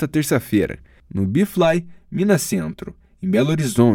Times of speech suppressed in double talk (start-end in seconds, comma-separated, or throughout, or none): none